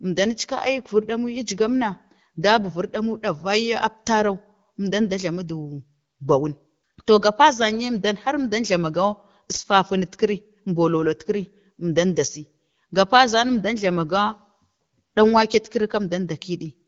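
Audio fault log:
No faults heard anywhere in this speech recording.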